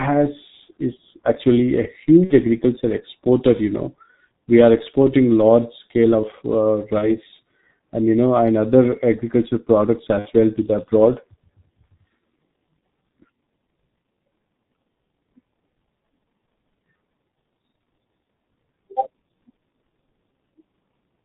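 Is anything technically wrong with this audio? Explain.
Yes, two faults are present. The speech has G.723.1 codec damage throughout: band-limiting removes everything above 4 kHz, and heavy, slowly updated modelling leaves it muffled and hoarse with smeared consonants, which fits a rate near 6 kbit/s. A spectrogram shows a hard ceiling at 4 kHz and blocky, blurred formants.

VoIP packet loss concealed by the speech codec occurs at 2.24–2.35 s before "agriculture exporter", at 6.98–7.09 s after "large scale of uh", and at 10.19–10.30 s between "agriculture products" and "well to the abroad". The decoder repeats its last pitch and filter at falling gain, so each gap becomes a fading buzzy tone or coloured noise. The first and third sound like about 60 ms of loss and the second like about 30 ms. A spectrogram shows frozen, repeating harmonic bands, and the waveform shows a decaying envelope that stays weak briefly after recovery.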